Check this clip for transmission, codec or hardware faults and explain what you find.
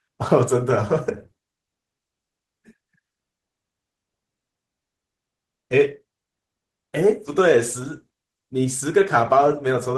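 Nothing wrong can be heard in the signal carrying this speech: it stays continuous, intact and steady in level throughout.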